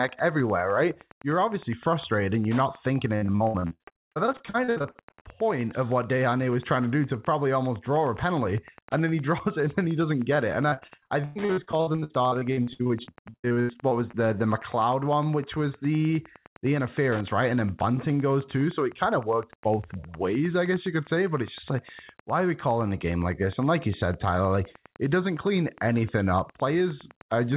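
Wi-Fi interference runs through the whole clip: a nearby radio's beacon, repeating every 102.4 ms, is rectified by the audio circuit, giving a steady ticking about ten times a second, roughly 25 dB below the speech.

Repeated packet loss (robotic sound) hits from 3.16 to 5.23 s and again from 10.69 to 14.15 s. In each stretch, dozens of short holes, the longest 69 ms and 106 ms respectively, are patched by extending the last sound, covering about 40% of the span. The result is choppy speech with pieces missing. Throughout, the band stops at 4 kHz, which fits a G.711 telephone codec.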